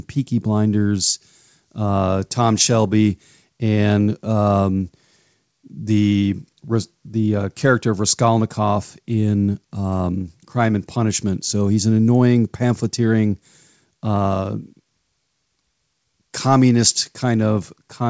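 Nothing goes wrong anywhere in this speech recording, which came through a call connection where the sound tops out around 8 kHz, about what you'd expect from a wideband call codec like G.722.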